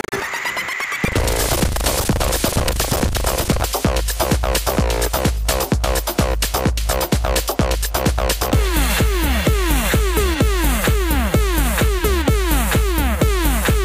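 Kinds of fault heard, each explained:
Buffer tearing: the writer and reader of the ring buffer have slipped out of step, so most of each 40 ms period replays audio from roughly a tenth of a second earlier, with hard joins at both edges, heard as a rattling 25 Hz buzz until 3.67 s.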